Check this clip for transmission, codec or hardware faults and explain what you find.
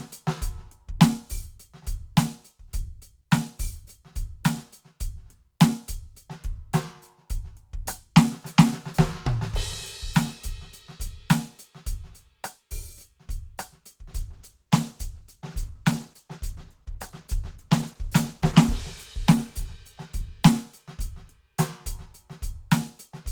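One transmission fault is present in this music clip. A call bitrate drop runs from 14.09 to 21.47 s. The encoder was forced to spend far fewer bits, coding coarsely and trimming high frequencies. The music turns rough, watery and muffled, worst for about 4.6 s, which fits a fall from roughly 48 to 14 kbps.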